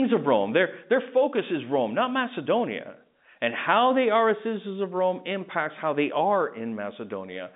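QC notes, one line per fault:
No faults were found in this speech clip. The G.711 telephone coding can be heard as a narrow line band of about 150 Hz to 3.7 kHz, with nothing above 3.8 kHz.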